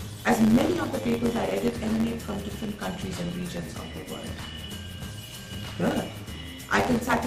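Throughout, a block size mismatch (truncated) discards the end of each block, which fits 512-sample writes, causing a 91.9 Hz buzz and audio running 1.07 times fast with its timbre kept.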